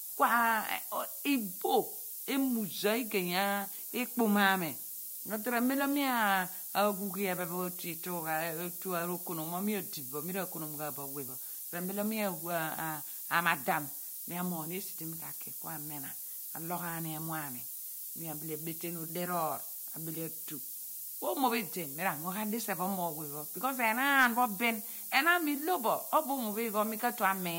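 From start to finish the speech carries low bit depth with noise shaping. The coarse rounding fits roughly 6-bit samples, with the error pushed upward, giving a steady thin hiss nearly as loud as the speech. A spectrogram shows noise brightening toward the top; the waveform looks stepped.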